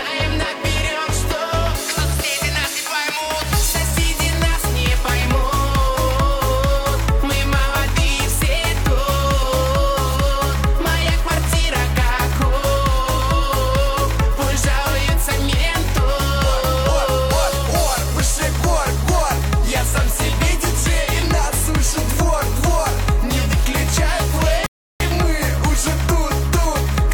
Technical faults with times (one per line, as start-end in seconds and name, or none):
24.66-25.00 rebuffering stall